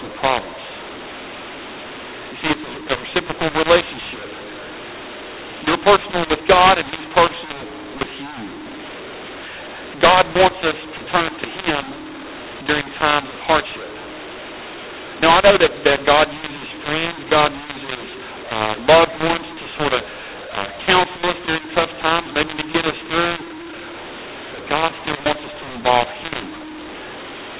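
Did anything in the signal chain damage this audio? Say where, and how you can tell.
Yes. mu-law and A-law mixed up, throughout the clip, at the codec decoding stage: speech coded as G.711 mu-law has been expanded with the A-law table. The two companding curves map each 8-bit code to different amplitudes, so levels come out scrambled, some too loud and some too quiet, and near-silent codes are lifted into an audible hiss that fills the pauses. The result is harsh, gritty speech over the expected sub-4 kHz telephone bandwidth.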